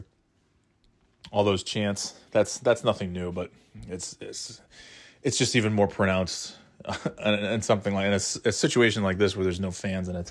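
No technical faults can be heard anywhere in the recording.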